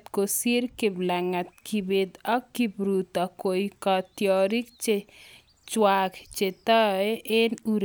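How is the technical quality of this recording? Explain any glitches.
Nothing stood out on listening to the speech as a technical glitch or fault.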